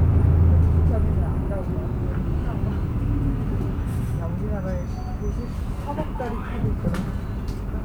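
Throughout, these everyday sounds carry low bit depth without dither: a grainy distortion that tracks the signal, gritty on quiet passages, whose likely cause is rounding to around 9 bits. A waveform shows visible steps; a spectrogram shows signal-dependent hash roughly 40 dB down.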